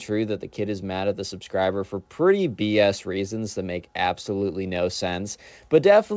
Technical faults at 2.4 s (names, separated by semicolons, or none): none